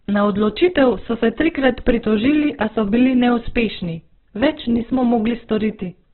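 From start to finish the speech sounds rough and grainy, with a noisy, sandpapery edge on the vowels, and there's nothing above about 4.1 kHz, so it's squeezed into a narrowband phone-like range. That's heavy damage from what is likely Opus compression in its music (CELT) mode. The encoder is starved of bits, so it fills bands with folded or noise-like content, and the result fits a bitrate down around 8 kbps.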